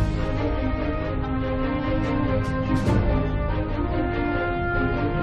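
No technical faults are audible.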